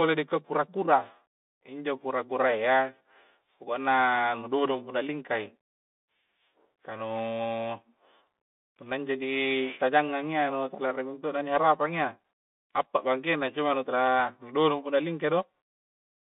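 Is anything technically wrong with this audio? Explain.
Yes. For the whole clip the speech sounds boxed-in and phone-like, with s sounds turning scratchy, a grainy hiss underneath, and roughness on louder, brighter syllables. This is the Bluetooth CVSD headset codec, whose band here runs only from about 200 Hz to 3.6 kHz. CVSD codes each sample as a single up-or-down step whose size adapts, which fits a 64 kbps link. Fast, loud high-frequency movement outruns that step and distorts, while the constant stepping leaves the hiss.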